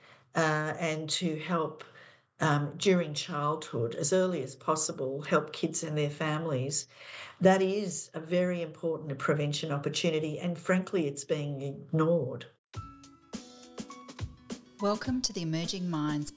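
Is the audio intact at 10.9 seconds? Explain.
Yes, the audio at 10.9 seconds is intact, with nothing to be heard there beyond the continuous, unbroken sound of the clip.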